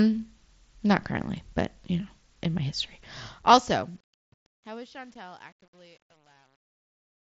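A fade-out stage that keeps too few bits, with no dither, causes truncation distortion from 2.91 s, just after "you know in my". The quiet tail turns gritty and square-stepped, worst from 4.18 to 7.27 s, which fits roughly 11-bit resolution.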